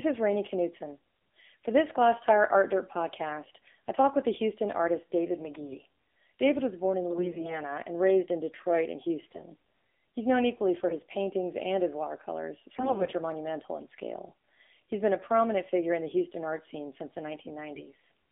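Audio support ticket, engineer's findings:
AMR narrowband mobile codec, whole clip. Band limited to 250 Hz–3.6 kHz. Buzzy, synthetic speech texture. Few excitation pulses per 5 ms subframe. Coarse, audible coding, which fits a low 7.4 kbps mode.

AMR bit errors, six bursts: 5.40–5.81 s; 7.10–7.55 s, after "was born in", before "and raised in"; 9.26–9.43 s; 10.89–11.02 s; 12.76–13.13 s, after "paintings and his watercolors"; 17.74–17.95 s, after "art scene since the". Pitch and level hold, but the speech turns hoarse and gargly. Flipped low-protection bits misplace pulses and skew gain and spectrum values.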